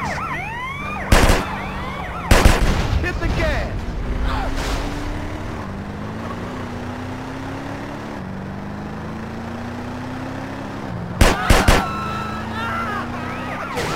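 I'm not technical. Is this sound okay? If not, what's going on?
No, there's crude rate conversion throughout: the audio's sample rate was changed by simply skipping samples, likely going from 48 kHz to 44.1 kHz, leaving a gritty fizz on louder, brighter sounds.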